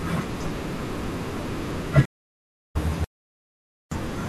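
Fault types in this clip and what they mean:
Stream reconnect: From 2.05 s the speech stops for about 0.69 s, and at 2.76 s it resumes at a later point, skipping roughly 0.4 s of what would have followed. The link dropped and the player restarted its decoder mid-stream. This differs from a plain dropout because playback does not pick up where it paused. It jumps ahead, and a freshly started decoder brings the sound back in.
Audio dropout to silence: From 3.04 s to 3.92 s the speech cuts to silence for about 0.87 s, with no room tone at all, and then carries on mid-flow. The likely cause is that the input was lost while the recorder kept writing silence. Unlike the reconnect, the timeline keeps running straight through the gap: the missing stretch is simply blanked in place, with no jump or decoder restart when the sound returns.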